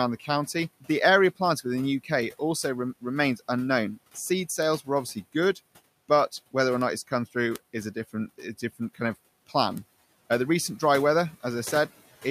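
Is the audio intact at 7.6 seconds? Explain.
No, a bit error spike at 7.56 s breaks it. A flipped bit in two consecutive samples throws the waveform off by a power of two before it snaps back, producing one sharp, broadband tick unrelated to the speech or the room noise beneath it.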